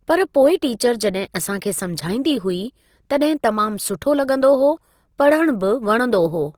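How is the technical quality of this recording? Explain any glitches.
The recording has plainly audible coding damage from start to finish. The speech sounds rough, grainy and noisy throughout. This is likely Opus compression in its music mode, at a low rate fitting about 24 kbps. Band energies are kept, but starved bands are filled with folded or noisy content. Bandwidth stays full, reaching about 20.3 kHz.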